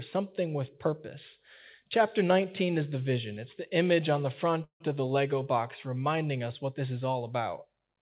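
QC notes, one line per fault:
4.64 to 4.89 s, call audio freeze. The speech halts and a brief fading buzz or hiss fills about 160 ms, with 110 ms of silence within the gap. Delayed packets likely emptied the jitter buffer. The speech resumes where it stopped, nothing lost, only pushed later.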